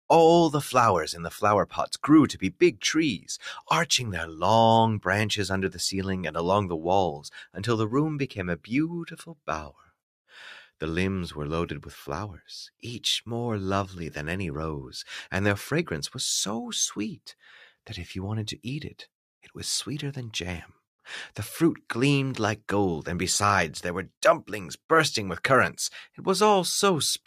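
A noise suppressor applied to music or sounds runs throughout the clip. A processor tuned for speech treats sustained tones, ambience and reverberant tails as background noise and keeps pulling them down, so the level swings by about 5 dB as it reacts. Onsets pass through with little change, but held material sinks behind them, giving a restless, pumping and thinned-out quality to the whole recording.

Sound cut by the noise suppressor appears at 2.34 to 2.82 s, 9.07 to 9.48 s and 9.68 to 9.91 s. In each window the suppressor misjudges part of the signal as noise and attenuates it harder than the surrounding audio, reaching about 12 dB at the first two spots and about 10 dB at the third. For a fraction of a second each time, the sustained or decaying sound dips sharply before the level recovers.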